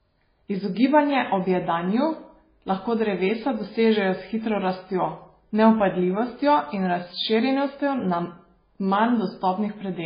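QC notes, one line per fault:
Throughout: MP3 compression, heavy. The speech has nothing above 5 kHz and a watery, swirling texture. The likely cause is MP3 encoding at a very low bitrate, which fits 16 kbps. Starved of bits, the encoder cuts the treble and drops weak frequency lines frame by frame.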